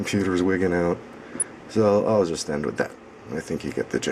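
From 1.29 to 1.43 s, DAB burbling: bit errors escaping error correction put short blips of noise in single sub-bands. A spectrogram shows blocky, isolated band flashes.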